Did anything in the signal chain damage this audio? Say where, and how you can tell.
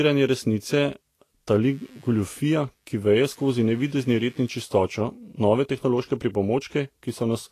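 Yes. At the codec stage, the speech is band-limited throughout, with nothing above 14.2 kHz, and the upper range has a plainly audible hissy, grainy texture, while consonant onsets sound smeared. This is likely Vorbis compression at a low bitrate, with the damage level pointing to something around 34 kbps. At that rate the encoder lowers its cut-off and quantises the treble residue so coarsely that fine detail is replaced by noise of similar energy.

In the analogue wiring, computer activity noise appears from 1.62 to 4.78 s. It is a buzzing, scratchy pulse train repeating at around 100 Hz and sitting roughly 35 dB below the speech. It starts and stops independently of what the talker is doing, which separates it from anything acoustic. Load changes in the host machine are modulating the shared ground of the audio circuit, injecting this interference for as long as that activity lasts.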